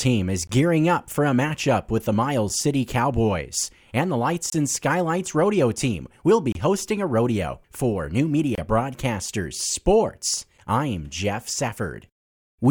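At 0.47 s, 2.49 s, 4.50 to 4.53 s, 6.52 to 6.55 s and 8.55 to 8.58 s, a gap between stream segments cuts the speech with a hard-edged silence of about 6 to 28 ms. The spacing matches 2-second segments whose timestamps leave a small hole that the player fills with silence. Unlike a packet dropout, no speech is removed. The audio after each hole simply arrives slightly later, and the holes recur at that steady 2-second rhythm.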